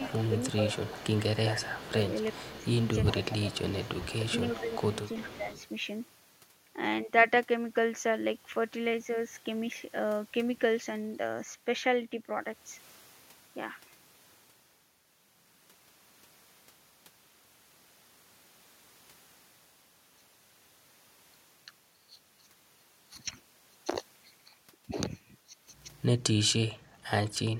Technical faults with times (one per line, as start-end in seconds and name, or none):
0.00-5.66 echo leak
0.29-2.54 speech suppressed in double talk
3.17-3.51 speech suppressed in double talk
4.19-4.66 speech suppressed in double talk
5.24-5.45 speech suppressed in double talk